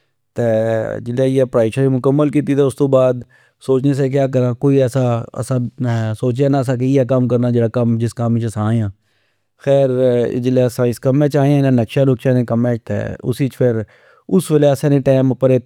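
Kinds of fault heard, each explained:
Block of digital silence: At 3.23 s, just before "سوچنے سیا", the speech drops to silence for 8 ms. That block of samples was never filled, likely because the output buffer ran late. There is no fade. The two hard edges merge into one tick or dip.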